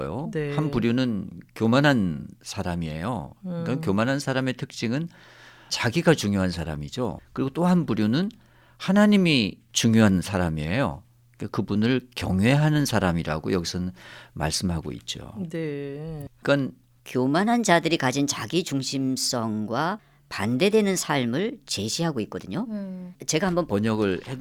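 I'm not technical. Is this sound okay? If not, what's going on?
No. From 17.06 to 23.72 s there's a section at the wrong speed: the speech runs about 1.18 times too fast, so it sounds hurried and roughly three semitones higher. Because pitch and pace change together, it's likely a playback speed mismatch, not just a pitch change.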